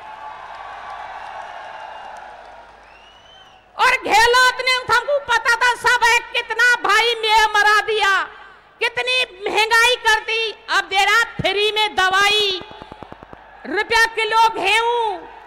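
A train of clicks runs from 12.11 to 13.34 s: about fifteen similar, regularly spaced pulses at 9.8 per second, peaking a few dB above the sound, likely from electrical interference.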